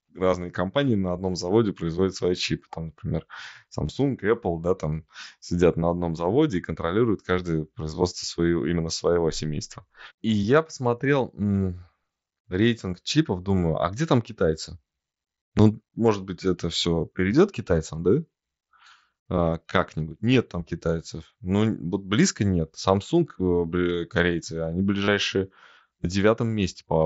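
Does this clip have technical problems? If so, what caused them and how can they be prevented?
Yes. Concealed Bluetooth headset packet loss shows up at 3.87 to 3.89 s, 20.34 s and 25.05 to 25.08 s. The receiver papers over about 22, 8 and 30 ms of missing audio by repeating recent waveform, giving short buzzy patches at 3.87 and 25.05 s over the mSBC sound, while the single lost packet at 20.34 s is nearly hidden. Keep the phone close, with a clear line of sight, and away from busy 2.4 GHz Wi-Fi.

At 15.59 s there's a tiny skip. That's likely a dropped buffer (overrun), where a sliver of audio went missing because the app didn't read its samples in time. Give the recording app higher priority or a larger buffer so it keeps up.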